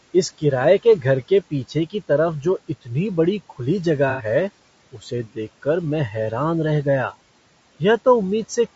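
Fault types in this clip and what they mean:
Low-delay AAC compression: The speech sounds rough and grainy throughout, with noise filling the gaps between harmonics and a thin, synthetic-sounding top band. This is likely low-delay AAC, whose short frames blur pitch detail, fitting a bitrate near 32 kbps. It is steady, unlike a dropout.
AAC frame loss with concealment: From 4.10 to 4.25 s the speech turns briefly smeared and phasey for about 90 ms, fitting three lost frames patched from the last good spectrum. It is too short to fade to silence, and unlike the compression roughness it is one isolated patch.
Speech cut by the noise suppressor: Between 4.93 and 5.38 s, short parts of the speech dip by up to about 12 dB and sound swallowed or faint, as the suppressor mistook them for noise. Nothing is smeared or replaced, which separates this from concealment. The speech is simply turned down.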